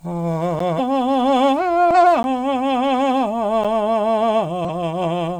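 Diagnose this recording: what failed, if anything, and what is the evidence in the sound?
Block of digital silence at 0.59, 2.23 and 3.64 s, at the driver or buffer stage. The music cuts out and returns with no fade, each gap being short enough to be heard as a tick or dip. The first two gaps last about 11.6 ms, which fits a 512-sample buffer left unfilled; the third lasts about 9.3 ms.

Damaged data in a compressed stream at 0.75 to 0.81 s, 1.91 to 1.95 s and 4.65 to 4.68 s, at the codec or storage stage. Each is a short glitch where the decoder misreads corrupted frames, loses sync and resumes at the next valid frame header.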